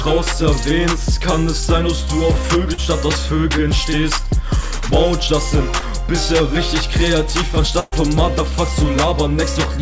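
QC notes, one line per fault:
2.74 and 5.80 s, short concealed packet loss: about 40 ms and 20 ms of audio never arrived, so the receiver carried the last sound forward (pitch or shaped noise) and blended back in, giving a quick smear.
7.80 to 7.94 s, burst of packet loss: a 122 ms fill, including 10 ms of silence, stands in for 120 ms of missing audio. The last sound is held and faded as a buzz or hiss, then playback jumps ahead.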